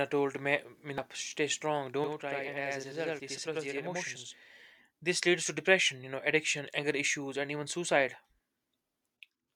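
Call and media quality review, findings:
Damaged data in a compressed stream, 0.98 s, just before "stay strong": a brief glitch. Decoder probably misread corrupted frames, lost sync and hunted for the next frame header.

Channel delay (doubling), 2.04 to 4.51 s, just after "stay strong": the sound is doubled, with an equal-level copy 85 ms late. One channel lags by a long buffer, which fits 4096 samples, and is summed to mono. Unlike room reverb, this is one discrete slap with no decaying tail.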